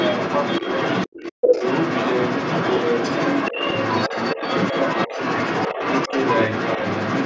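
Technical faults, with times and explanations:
Throughout, other side's voice leaking through: a second voice sits under the talker at roughly equal loudness for the whole clip. This is likely the far end playing from the device's loudspeaker and reaching the microphone, with the echo canceller failing to subtract it.
1.32 to 1.65 s, 3.52 to 3.59 s, 4.09 to 4.41 s, 5.08 to 5.18 s and 6.08 to 6.14 s, speech suppressed in double talk: the talker's level dips briefly, deepest and longest at 1.32 s where it nearly vanishes, and less elsewhere, by about 5 to 10 dB. Both sides likely overlap here, and the canceller turns everything down.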